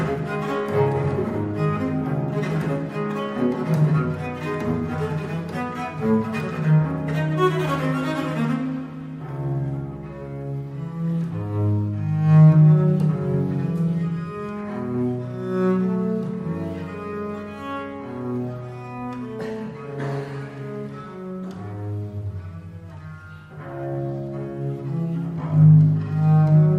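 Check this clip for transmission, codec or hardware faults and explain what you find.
Nothing stood out on listening to this clip.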